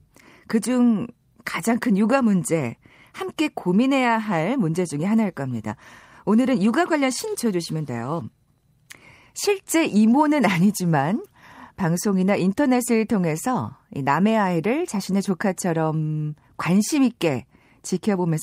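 At 7.35 s a skip ahead drops roughly 0.4 s of speech with no fill. Playback jumps forward and the two sides butt together, so a waveform shows an abrupt splice and a spectrogram shows harmonic tracks breaking off and restarting mid-contour.

From 7.45 s to 8.63 s a jitter buffer speed-up drains the excess delay by cutting short pitch-period pieces repeatedly. Speech runs at 111% with pitch unchanged, sounding hurried, and about 0.15 s goes in total. The spectrogram shows compressed syllables and a waveform with periodic cycles of unchanged length, some cut out.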